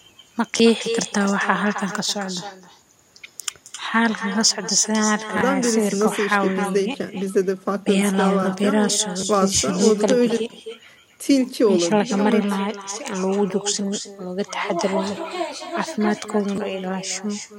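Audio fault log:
throughout: echo with no canceller. The far end is playing the call over a loudspeaker, its microphone is catching that playback, and nothing subtracts it before it returns. Every phrase therefore comes back after a round trip of around 300 ms as a copy about 11 dB quieter than the speech, thinner in tone, so the speech carries a trailing shadow.
0.58–0.60 s, 5.38–5.41 s, 6.92–6.94 s, 9.21–9.23 s, 12.91 s, 15.16 s, 16.56–16.58 s: repeated buffer. Fresh audio failed to reach the playback device in time, so it replayed the last chunk of about 10.67 ms, which fits a 512-sample buffer, once to three times per event. Because that chunk is so short, each repeat with its hard joins sounds like a click or brief buzz rather than a stutter, and roughly 10 to 30 ms of real speech goes missing.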